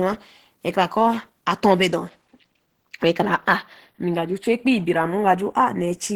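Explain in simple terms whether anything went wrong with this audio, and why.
Yes, two things went wrong, and both last the whole clip.

Channels drifting apart: the left and right sides come from slightly mismatched clocks, sliding out of step by about a tenth of a millisecond by the end. Played in mono, this gives a slowly moving flanging, not the steady hollow tone of a fixed delay.

The speech sounds muffled, hoarse and grainy throughout, most likely from Opus compression working in its speech-oriented mode. It turns rough and noisy instead of swirling or warbling the way MP3 damage does.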